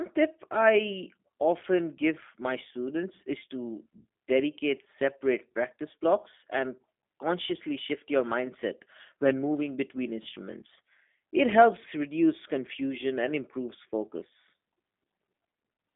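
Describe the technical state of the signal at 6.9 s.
At 6.9 s the speech is carried through G.729 coding, present for the whole clip. The codec rebuilds each 10 ms frame from a vocal tract model, a pitch predictor and a few pulses. Sound is confined to about 200 Hz to 3.5 kHz. The voice comes through plainly rough and synthetic.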